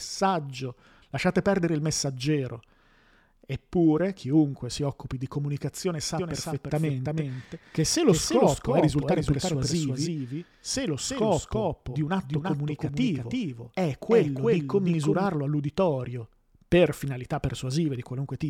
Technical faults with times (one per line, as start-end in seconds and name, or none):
6.18-15.26 doubled audio track